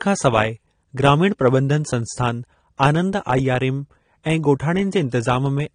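From start to finish the speech has nothing above 9.8 kHz, so it sounds dull, and the codec damage is plainly audible, with a smeared, warbly or fizzy edge on sibilants and held sounds. That's most likely AAC compression, AAC-LC at a low bitrate, consistent with about 32 kbps. The encoder quantises its frequency lines against a hearing model, and when bits run short it drops the top of the band and thins out or patches over the rest of the spectrum.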